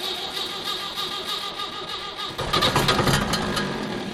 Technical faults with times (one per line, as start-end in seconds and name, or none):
1.50-4.14 de-emphasis applied wrongly